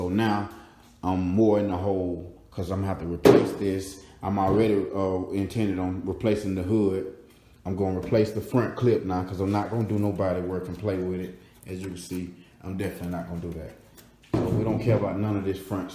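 No technical faults can be heard anywhere in the signal.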